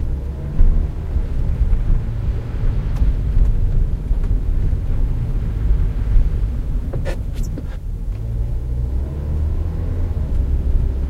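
No technical faults can be heard anywhere in this clip.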